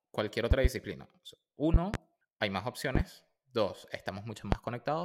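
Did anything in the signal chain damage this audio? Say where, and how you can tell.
Yes. Loud pops cut across the speech four times. They fall at 0.51 to 0.68 s, at 1.74 to 1.97 s just before "hay más", at 2.95 to 3.03 s just after "hay más", and at 4.52 to 4.56 s. The first three are double pops. The last is a single, louder one. They peak around 20 to 25 dB above the speech, which carries on underneath. That points to voltage steps in the analogue wiring, likely a loose plug or static discharge.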